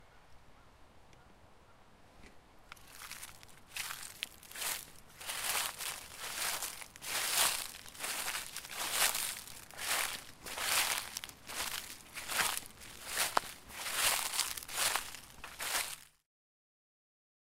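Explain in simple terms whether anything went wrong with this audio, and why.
Nothing went wrong with this audio. Near the end the sound fades out gently, finishing at 16.3 s, the way an editor would smoothly lower the volume to close a recording.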